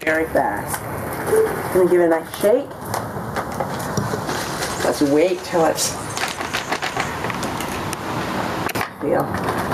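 The audio shows gain pumping throughout. The gain swings by around 15 dB. Loud and soft parts sit close in level and sound squashed. The likely cause is input gain set far too high, with a fast limiter clamping each peak.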